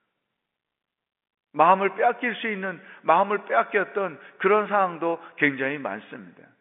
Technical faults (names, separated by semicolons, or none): none